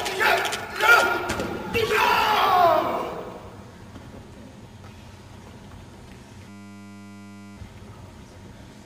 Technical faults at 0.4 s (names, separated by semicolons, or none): none